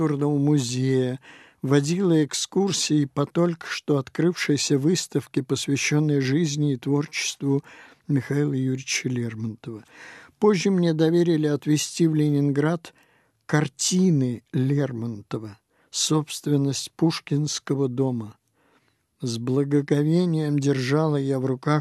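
No technical fault can be heard anywhere in the recording. Nothing in the audio points to a problem at any point.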